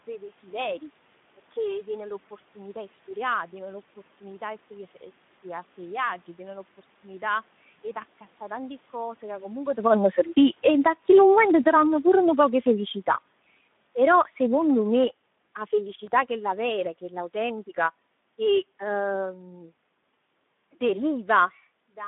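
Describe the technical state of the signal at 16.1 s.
A brief smear that fades out runs from 16.05 to 16.09 s, just before "chella vera chella autentica". This is VoIP packet loss concealed by the speech codec: the decoder stretched its last pitch and filter across a gap, consistent with one lost 20 ms frame, and lowered the gain as it went. Underneath, the sound is hoarse, noisy and confined to 150 Hz to 3.6 kHz throughout, the plainly audible damage of the Speex codec, which fits a roughly 11 kbps mode.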